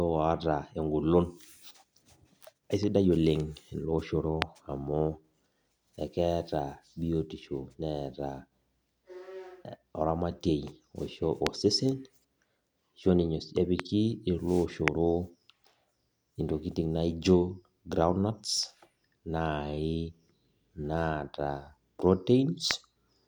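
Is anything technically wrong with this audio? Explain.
Yes. Five loud pops break through the speech at 4.42, 11.47, 13.80, 14.88 and 22.71 s. Each is a single sharp crack about 20 ms long, roughly 20 to 25 dB above the speech, which carries on underneath. The likely cause is a brief voltage spike, from static or a switch or driver glitch, entering the signal path.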